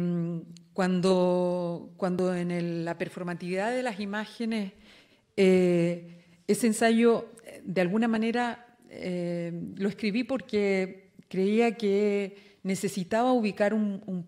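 At 2.19 s and again at 8.16 s the sound skips forward: roughly 15 ms vanishes, and the material on either side is butted straight together. The likely cause is audio missing between chunks, where a short stretch is lost each time one 3-second block closes and the next opens. The two skips sit about two blocks apart. Because no gap of silence is left at the join, this is heard as a jump in continuity rather than the brief hole a dropout would leave.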